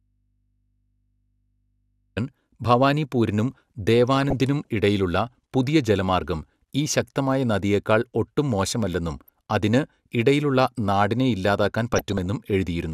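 A speech clip that opens with the audio dropout to a faint residue already under way. Until 2.17 s there's only mains hum, about 45 dB down, and then the speech cuts in abruptly. That's likely a lost feed into a still-live input rather than a pause or fade. After that come three patches of DAB burbling, at 4.17–4.42 s, 9.18–9.29 s and 11.93–12.26 s. Each puts short blips of noise on top of the speech, the sign of weak reception letting bit errors through. Individual MP2 sub-bands are hit, with the error rate around a fraction of a percent.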